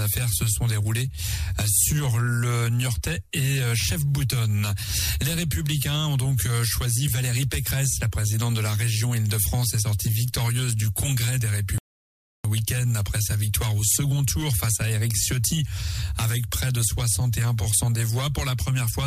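The audio has a single audio dropout to silence from 11.78 to 12.45 s, a gap of about 0.66 s where the sound breaks off abruptly and then returns mid-flow. What sets it apart from a natural pause or a noise gate is that the gap is dead digital silence with no room tone or fade at either edge, and whatever was happening is lost. The likely cause is a momentary loss of the input, such as a disconnect or accidental mute, while recording continued.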